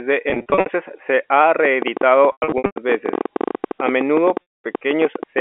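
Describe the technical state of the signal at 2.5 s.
At 2.5 s the signal falls inside a packet loss with pitch repetition, spanning 2.32 to 2.76 s. About 320 ms of audio is missing, scattered across those 440 ms, with the longest continuous gap around 100 ms. The receiver fills each hole by repeating the last pitch period and fading it out, so the sound turns briefly buzzy and held, then thins toward silence before cross-fading back. On a spectrogram this shows as frozen, evenly spaced harmonic stripes that dim out, and the waveform shows a short repeating cycle shrinking in amplitude.

The same moment also sits within a train of clicks running from 1.65 to 5.39 s, starting just after "se han". Roughly fifty clicks arrive at about 12.3 per second, spaced irregularly, with peaks standing out by around 10 dB over the sound, likely from interference or a faulty connection. They are heard as uneven ticking that continues through the dropout. 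On a spectrogram each click is a thin vertical line across the band, and in the waveform each is a sharp isolated spike. Everything sits inside the telephone band of roughly 300 Hz to 3.7 kHz carried by the G.711 line.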